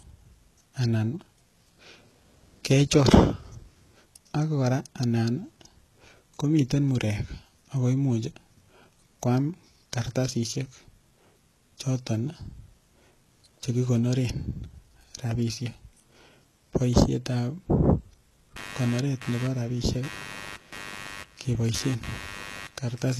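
HE-AAC compression is the likely cause of the damage running through this entire speech recording. Nothing reaches above 12.3 kHz, and the treble above the coded band is synthesized by copying lower bands upward. That leaves s sounds gritty and lispy, and the coding damage is plainly audible, consistent with a bitrate around 16 kbps. Computer activity noise enters at 18.56 s and lasts to the end at 23.20 s: a buzzy, chirping pulse near 100 Hz, roughly 15 dB below the speech. Processor or peripheral load shifting the audio circuit's shared ground produces it, so it tracks the machine's activity rather than the talking.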